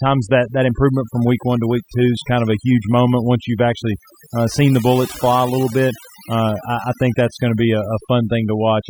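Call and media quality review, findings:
Overdone noise removal, throughout: background dropped and broken into twinkling specks. Suppressor set too aggressive, zeroing bands near its noise estimate, taking quiet speech components too.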